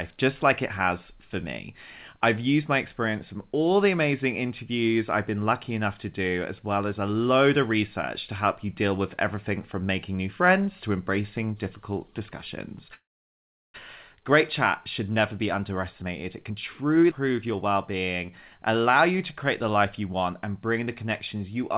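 At 12.94 s the sound trails off in a brief buzzy tail and then stays silent for about 740 ms. At 13.76 s it resumes exactly where it left off. This is a call audio freeze, likely caused by packets stalling in transit until the jitter buffer ran dry. It differs from a dropout or skip because nothing is lost. About 800 ms of gap is inserted, and everything afterwards plays that much later.

From 16.02 to 17.04 s a jitter buffer speed-up runs the speech at about 112% of normal rate while the pitch stays put, so it sounds hurried rather than chipmunk-like. The receiver is trimming tiny pitch-period slices, roughly 150 ms in total, to shed extra buffered delay. A tape-speed change would raise the pitch too. Here only the pacing tightens, through many small cuts.

Between 17.11 and 17.13 s there is a skip ahead. Roughly 400 ms of speech simply vanishes, and the two sides are spliced together with only a 4 ms join. 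Unlike the freeze, there is no pause at all. Unlike the speed-up, the loss is one abrupt jump, so the speech lurches forward mid-flow instead of gradually rushing.

From 17.32 to 19.35 s a jitter buffer slow-down does the reverse of the earlier speed-up. The receiver repeats single pitch periods and bits of pauses, adding 188 ms, to rebuild its reserve. Speech drags at about 91% speed with unchanged pitch, stretching vowels. A pitch-shifting slowdown would deepen the sound, but this one only draws it out.

Throughout, the call codec's narrow band is audible. Nothing reaches above 4 kHz, which fits G.711 A-law at 64 kbps.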